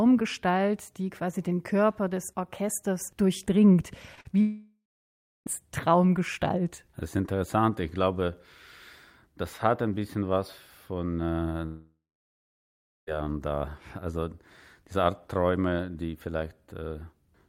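At 4.15 to 4.19 s and again at 4.21 to 4.27 s there are two short concealed packet losses, gaps of about 20 ms and 40 ms where the receiver bridged the hole by extending the preceding sound before blending back. Each is heard as a quick smear or wobble rather than a break. The audio never falls silent, and that keeps them apart from the longer losses that follow.

From 4.41 to 5.48 s the audio gives way to a fading continuation of the last sound, which then settles into about 0.68 s of silence before the speech resumes further on, with the lost stretch of about 1.06 s simply gone. The same happens from 11.66 to 13.09 s, with about 1.11 s of silence inside a gap of roughly 1.4 s. This is likely a long network dropout. Unlike the brief concealments, the filler cannot hold and audibly dies away to nothing, and the speech picks up later without the missing part.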